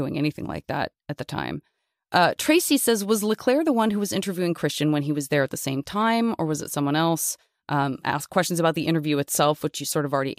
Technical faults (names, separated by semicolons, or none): none